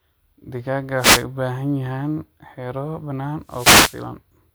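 An analogue FM wireless microphone loses its radio signal twice in this speech clip as reflections cancel it, letting receiver noise surge up. The result is a wireless microphone noise hit, a burst of static swish over the voice, from 0.97 to 1.25 s and from 3.46 to 4.06 s.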